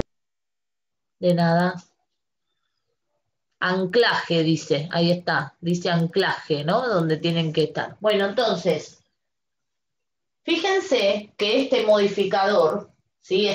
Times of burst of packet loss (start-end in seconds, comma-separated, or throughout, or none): none